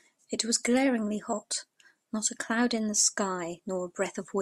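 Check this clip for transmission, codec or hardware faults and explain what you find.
Nothing faulty can be heard in this speech recording.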